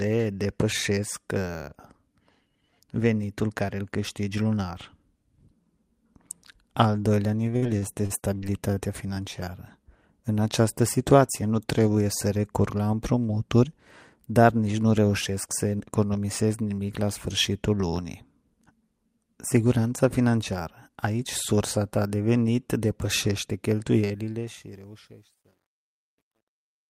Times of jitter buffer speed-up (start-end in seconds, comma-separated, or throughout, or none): 11.15-11.79